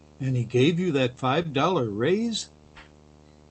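Running under the whole clip of speech is a video or display buzz: a steady 75 Hz hum from a screen or video cable leaking into the audio, with hash riding on top of it, sitting roughly 25 dB below the speech. Since 75 Hz is the field rate of the picture, the buzz is locked to the display refresh rather than to the mains, which is a good clue to where it's getting in.

Then at 1.42 s there's a short stall from a late packet, lasting until about 1.47 s. A packet didn't turn up in time, the jitter buffer ran dry, and the receiver held the last bit of sound for 24 ms while it waited, then carried on from exactly where it left off. Nothing goes missing, but the sound is stretched for a moment with a slight buzz or dip, and playback ends up 24 ms later than before. The Opus call path carrying it is band-limited to 8 kHz, so the top end is gone throughout.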